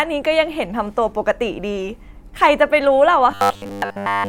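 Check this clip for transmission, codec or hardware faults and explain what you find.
One fault is present. Robotic sound from repeated short buffers, 3.31 to 4.28 s: starved input likely forced repeats of a segment fitting a 10 ms buffer, replacing most real speech with a rigid, metallic 100 Hz buzz.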